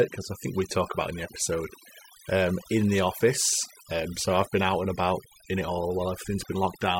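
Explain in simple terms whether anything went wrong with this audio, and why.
Overdone noise removal affects the whole clip. A cleanup tool was set too strong. It erased background and quiet speech parts, leaving twinkly silence.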